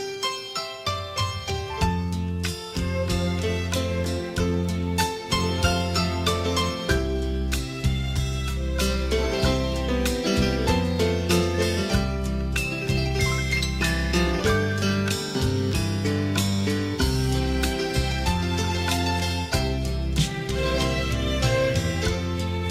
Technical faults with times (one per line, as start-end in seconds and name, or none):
none